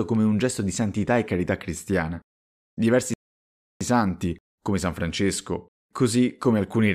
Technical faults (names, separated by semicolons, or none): rebuffering stall